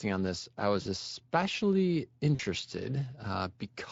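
Throughout the speech, the Speex codec leaves plainly audible damage: a hoarse, noisy texture riding on the voice, which fits a mid-rate Speex setting of roughly 20 kbps. This CELP coder models the vocal tract with a filter and spends its limited bits on an excitation signal, so what degrades is the buzz and breath underneath the speech, and the upper band is only a noise-like fill. That sets it apart from a transform codec's swirly, metallic artefacts.

From 0.81 to 0.88 s, just after "on this I", VoIP packet loss concealed by the speech codec appears. About 40 ms of audio went missing, which fits two lost 20 ms frames. The decoder covered the gap by repeating its last pitch and filter at falling gain, so the speech smears into a short buzzy tone or coloured noise that fades. Because each frame builds on the previous one, the voice stays weak for a moment after the stream resumes. A plain dropout would instead leave a hard silent hole.

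The same concealment occurs again from 2.35 to 2.41 s, with another stretched, fading sound where roughly 40 ms was lost.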